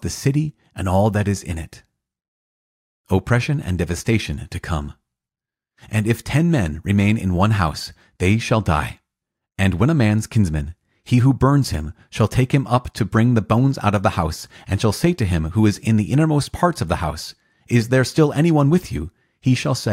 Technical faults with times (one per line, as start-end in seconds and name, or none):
none